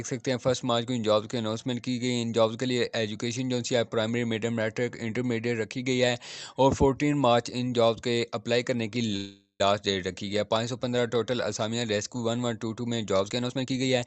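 From 9.16 to 9.61 s the sound stops moving forward. The last instant is stretched into a buzzy or hissy, fading continuation that thins to about 0.11 s of silence before the audio resumes exactly where it left off, with nothing skipped. This call audio freeze was likely caused by packets stalling in transit until the jitter buffer ran dry. The receiver filled about 0.44 s with synthesized sound, and everything afterward plays that much later.

From 13.24 s to the end at 14.06 s, the audio rushes ahead at about 135% of normal speed while the pitch stays unchanged. This jitter buffer speed-up happens when the receiver holds more audio than its target, as delayed packets pile in together. To bring latency back down, it repeatedly trims pitch-period-sized slices, removing roughly 0.3 s in total and giving this passage a hurried, compressed feel. Throughout, the Opus call path runs at 40 kbps and its top end stops near 8 kHz.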